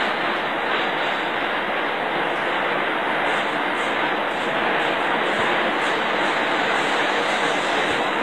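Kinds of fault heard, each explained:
HE-AAC compression: The audio was most likely squeezed through HE-AAC at a low bitrate, consistent with around 24 kbps. The encoder kept only the lower spectrum and manufactured the treble by copying lower bands upward under a coarse envelope. Throughout the clip the high end stays bright but sounds synthetic and plainly damaged, its harmonics not matching what sits below the crossover, and the spectrum stops entirely at 14.2 kHz.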